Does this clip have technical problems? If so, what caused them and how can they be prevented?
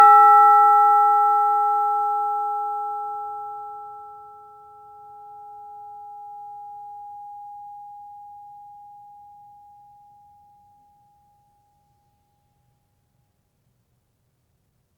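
Yes. Sample clock jitter is present throughout: an unsteady converter clock, off by a microsecond or two, mistimes samples, adding hiss about 40 dB under loud, bright music. It can be prevented with a stable, low-jitter clock source that is cleanly distributed to the converter.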